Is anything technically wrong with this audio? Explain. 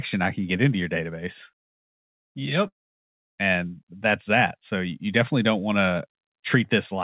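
Yes. From 2.68 to 3.22 s the sound smears into a fading buzz, drops to near silence, and then resumes with a piece of speech missing. This is likely a long network dropout: about half a second of packets never arrived, and the receiver stretched the last sound before giving up, all on a call path that carries nothing above 4 kHz.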